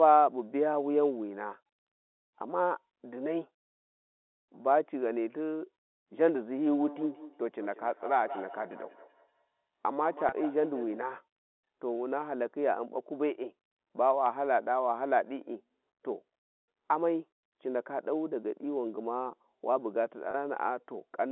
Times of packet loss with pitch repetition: 10.29-10.32, 20.31-20.34

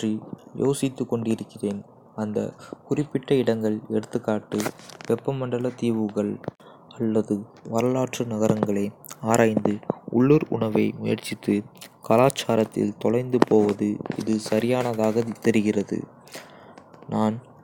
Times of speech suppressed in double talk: none

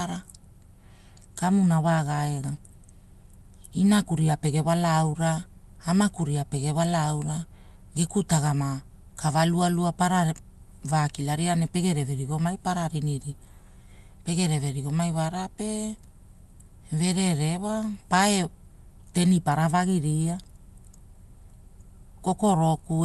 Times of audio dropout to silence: none

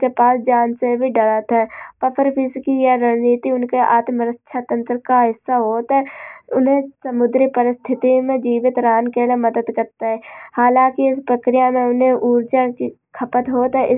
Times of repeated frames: none

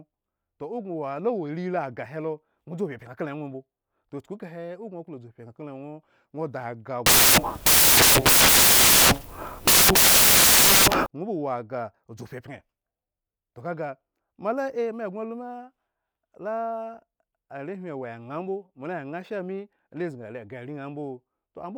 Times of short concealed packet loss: none

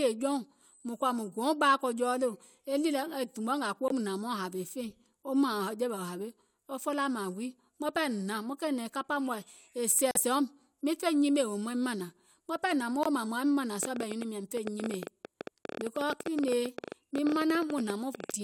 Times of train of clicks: 13.83-18.30

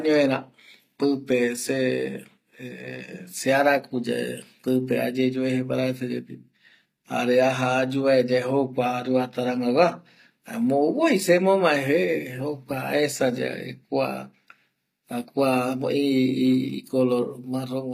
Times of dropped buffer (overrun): none

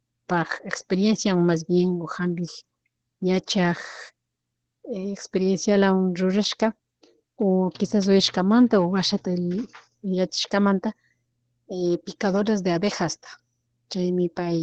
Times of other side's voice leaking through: none

